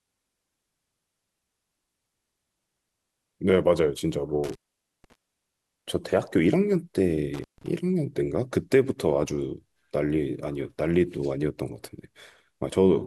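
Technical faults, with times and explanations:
4.44–5.15 s and 7.34–7.68 s, intermittent contact: the speech drops out twice, for about 490 ms in the first event and about 140 ms in the second, with a burst of crackle on either side of each gap. While the connection is broken a faint hiss remains. The crackle comes from a loose plug or cable conductor scraping as it opens and recloses, so the signal is cut abruptly and then returns.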